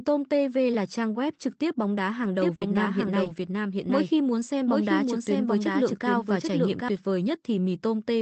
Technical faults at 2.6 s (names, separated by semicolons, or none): doubled audio track; burst of packet loss; lost packet rebuilt from error correction